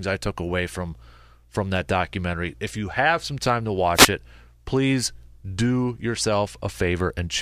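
An analogue FM wireless microphone lost signal strength as reflected radio paths cancelled, letting receiver noise rise, causing a wireless microphone noise hit from 3.94 to 4.08 s, between "have some time to" and "it please do": a brief swish of static.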